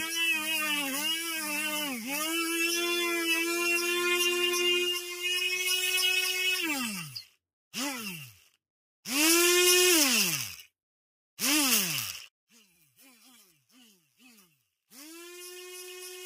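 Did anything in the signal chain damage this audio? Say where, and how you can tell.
Yes. In call processing, a speech noise suppressor left on for this non-speech material treats steady sound as noise, so the level pumps by around 10 dB throughout.

The same stage cuts sound at 1.17–1.5 s, 4.94–5.25 s, 6.88–7.37 s, 7.93–8.57 s, 12.63–13.0 s and 13.45–14.21 s, dropping steady passages by up to about 12 dB.

From 12.28 s to the end, the level falls by about 23 dB. This is likely one channel inverted in the wiring, cancelling the shared content when summed to mono.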